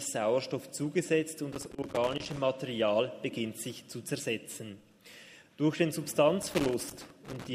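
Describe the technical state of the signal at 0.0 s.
At 0.0 s the signal is intact, with no fault present at that moment.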